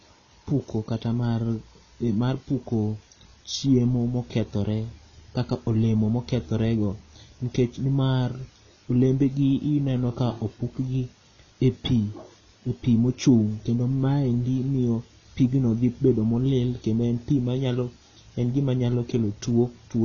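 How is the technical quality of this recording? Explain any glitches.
The technical quality is poor, with plainly audible codec damage running through the whole recording. The damage is consistent with AAC compression, likely AAC-LC at a low bitrate around 24 kbps. The encoder has spent its limited bits on the strongest parts of the spectrum and discarded the rest, so nothing is present above about 6.9 kHz. The speech sounds dull and muffled, and sustained sounds and sibilants take on a smeared, warbling, fizzy texture.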